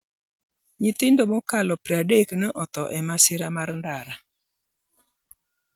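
Speech recording with no audible technical faults.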